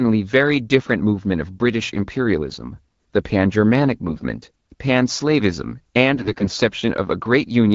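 AMR bit errors hit from 4.08 to 4.25 s and again from 6.15 to 6.60 s. Flipped low-priority bits misplace the excitation pulses and skew the finer pitch, gain and spectral values, so the speech holds its pitch and level but turns hoarse, scratchy and gargly.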